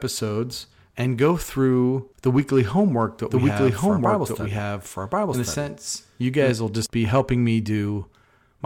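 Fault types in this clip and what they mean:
Doubled audio track: the speech is heard twice at once, with a second full-band copy trailing the first by about a second. From 3.30 s, just after "the weekly homework that", the copy comes in abruptly at about the same loudness as the original. It carries no decay or room colour, so it is not an echo. It stops just as suddenly at 6.50 s, before "will just be helping". A second, slower capture path is the likely cause.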